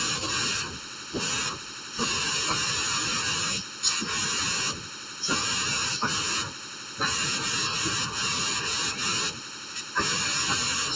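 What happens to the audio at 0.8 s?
At 0.8 s the speech sounds hollow and phasey, with a character that doesn't change, because channel delay (comb filtering) runs through the whole clip. One channel arrives under a millisecond late, and when the two are summed to mono, whatever they share cancels at evenly spaced frequencies. The first notch falls somewhere around 700 Hz, and more follow above it, within a band that the call's microphone processing caps at 8 kHz.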